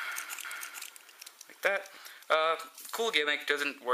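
From about 0.45 s to 1.97 s there's a doubled audio track: a second, full-band copy of the sound trails the original by roughly half a second, sitting a few dB under it. It's bone dry, with no decay or room tone, and it cuts in and drops out abruptly at those edges. The likely cause is the same signal being picked up again through a slower path, or an edit leaving two copies out of step.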